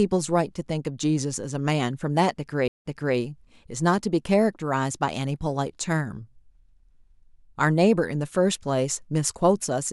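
At 2.68 to 3.17 s, a stream reconnect: the speech drops out for about 151 ms, then a fresh decoder resumes 340 ms earlier, briefly repeating audio.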